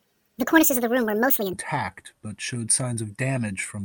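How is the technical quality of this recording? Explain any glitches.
The opening of the recording has a speed fault. From 0 to 1.53 s there is a section at the wrong speed, running 1.72 times too fast, likely from a wrong playback clock. The speech rises about ten semitones and sounds chipmunk-like and rushed. A spectrogram shows the harmonics stretched upward and compressed in time until they drop back at 1.53 s.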